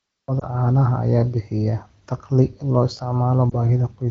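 At 0.40 to 0.45 s, just before "caanaha ayaa bixiya", and again at 3.50 to 3.54 s, the speech briefly dips or warbles, consistent with lost AMR speech frames. Each gap fits a single corrupted 20 ms frame that the wideband decoder covered by repeating the previous pitch and vocal tract settings at reduced gain. On a spectrogram the harmonics smear flat and fade before the voice resumes weak or rough for a moment, and the waveform shows an envelope sag.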